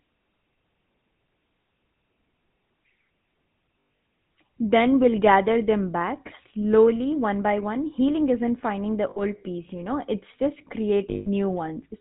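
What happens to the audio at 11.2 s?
Lost GSM frames, from 11.1 to 11.29 s, right after "you know it's just". For about 160 ms, which fits a run of eight 20 ms frames, the decoder kept repeating the last good frame's settings. The result is a rough, metallic ring where the sound should continue. On a spectrogram it shows as smeared, repeated horizontal bands. On the waveform it shows as an oddly regular envelope.

Underneath, the GSM full-rate codec is at work here too, at 13 kbps. Its pulse-driven vocal-tract model gives the speech a plainly audible buzzy, gravelly roughness. On a spectrogram, nothing appears above 4 kHz.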